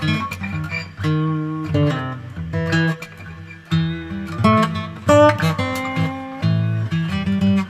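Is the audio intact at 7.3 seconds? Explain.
Yes, the audio at 7.3 seconds plays through cleanly, with no dropout, click, distortion or other fault at that moment.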